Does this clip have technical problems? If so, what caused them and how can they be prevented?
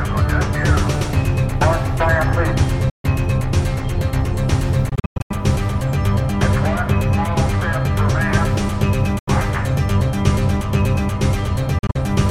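Yes, the clip has four short silent holes, most likely a Bluetooth dropout: audio packets reached the headphones too late and were discarded. The gaps fall at 2.90–3.05 s (about 142 ms), 4.89–5.31 s (284 ms of gaps scattered over 0.41 s, the longest 102 ms), 9.19–9.28 s (81 ms) and 11.79–11.96 s (102 ms scattered over 0.16 s, the longest 41 ms). In each, the sound resumes further along, as if it had kept playing. On a waveform these show as flat, sharp-edged gaps, and on a spectrogram as blank vertical bands across all frequencies. Keeping the source close to the headphones with no obstructions, and moving away from crowded 2.4 GHz interference, would prevent this.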